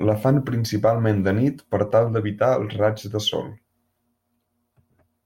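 Nothing technically wrong stands out in this speech recording; there's no fault to point to anywhere in it.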